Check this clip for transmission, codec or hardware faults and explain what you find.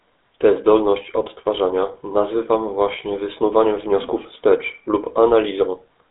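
One codec fault runs through the whole speech clip. The GSM full-rate codec leaves the audio band-limited to roughly 250 Hz to 3.6 kHz, with nothing above 3.8 kHz, which fits a 13 kbps GSM link. The codec drives a vocal-tract model with sparse, evenly spaced pulses, giving a plainly audible buzzy, gravelly roughness. A plain telephone band filter would sound muffled but clean, without this grit.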